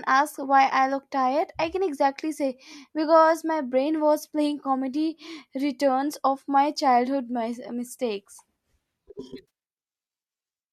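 At 9.48 to 9.50 s, an AAC frame loss with concealment leaves a 20 ms smeared, phasey patch. That fits about two dropped frames rebuilt from the previous spectrum, likely over a low-delay AAC path.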